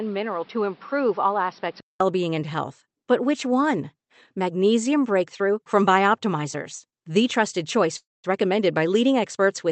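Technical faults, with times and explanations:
0.0–2.0 s, input switched to a poorer device: the sound is dull and band-limited with nothing above 5.6 kHz, a bit quieter, with extra background noise. It likely came from a lesser mic, and clears after a 200 ms silence before "being and health".
6.89 s, short stall from a late packet: a 32 ms hold stretches the sound slightly just before "the trusted", since the jitter buffer ran dry. Nothing is lost.
7.97–8.26 s, call audio freeze: after "the trusted", the sound hangs as a fading buzz or hiss, then about 200 ms of silence, likely from held-up packets. That adds a 272 ms gap without dropping anything.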